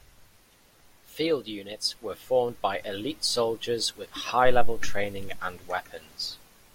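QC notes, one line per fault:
No faults found on listening; the speech passes QC with nothing to flag.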